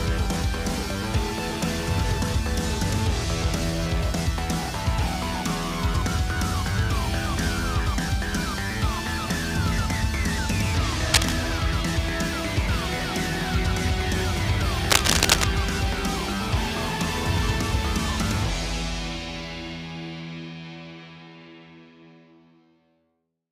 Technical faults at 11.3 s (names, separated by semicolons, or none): cable scratch noise